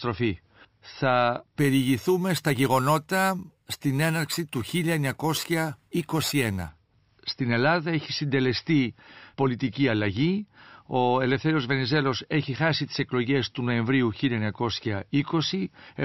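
Imaging from sample-and-hold upsampling runs from 1.59 to 6.69 s: the speech points to a 12 kHz source raised to 48 kHz by repeating samples without smoothing. Mirrored spectra fill 6 to 12 kHz at about 16 dB below the speech, heard as a metallic fizz that tracks loudness and moves against pitch.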